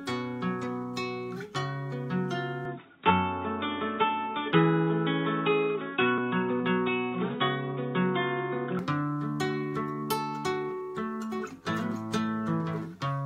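From 2.65 s to 8.79 s the sound abruptly narrows, losing everything above 3.8 kHz and turning dull and boxy, with a level shift of about 5 dB and a faint new noise floor. There is no gap at either transition. The likely cause is the input switched to a poorer device.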